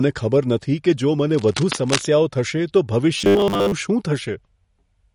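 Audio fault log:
Throughout, MP3 compression: the speech has a plainly audible watery, swirling quality, with s sounds turning metallic and chirpy and consonant onsets smeared, which points to a low-bitrate encode of about 48 kbps. At that rate the encoder can't keep every frequency line, so weak lines get dropped and come back from frame to frame, and that flicker is what makes the sound swim. The likely cause is a lossy MP3 stage in the chain.
1.29 to 2.06 s, cable scratch noise: for about 0.8 s a rough, uneven scratching and rustling sits over the speech at roughly 10 dB below it. The bursts are dense and irregular, not a steady hiss, which fits a contact whose resistance is jumping around as it moves. The likely cause is a worn cable, connector or control being handled during the recording.
3.18 to 3.72 s, robotic sound from repeated short buffers: for just over half a second the speech turns into a rigid, metallic buzz pitched at 100 Hz that still roughly follows the speech underneath. 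Most of that stretch, around two-thirds or more, is re-played audio rather than new signal, and the 100 Hz buzz means a 10 ms chunk keeps looping. The likely cause is audio arriving too slowly and the software filling gaps by repeating the last buffer.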